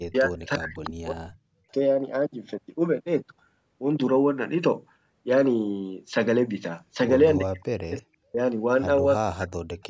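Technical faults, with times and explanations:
0.0–1.68 s, 7.38–8.39 s and 9.14–9.56 s, speech suppressed in double talk: the speech dips by up to about 40 dB and breaks up, likely because an echo canceller muted it while the far side was also talking.
0.76–0.9 s, echo leak: a brief, faint copy of the speech arrives 342 ms late, about 15 dB down, likely loudspeaker echo that the far end's canceller didn't fully remove.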